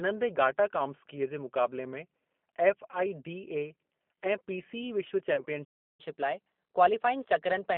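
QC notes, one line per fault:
throughout: G.729 codec, a band of about 200 Hz to 3.4 kHz with a rough, synthetic edge fitting 8 kbit/s CELP. The spectrogram shows nothing above 3.4 kHz.
2.91–2.97 s and 5.35–5.44 s: VoIP packet loss concealed by the speech codec. About 20 ms and 30 ms are filled with a fading, smeared buzzy tone or coloured noise, seen as flat, decaying energy.
5.64–6.00 s: playback stall. The sound cuts off mid-flow into 0.34 s of flat silence, likely because the player ran dry. The waveform shows a clean gap.
6.00–7.77 s: catch-up at higher speed. The audio runs 1.1 times faster and about 1.5 semitones sharp to recover the backlog. Harmonics sit slightly higher and the rhythm is compressed.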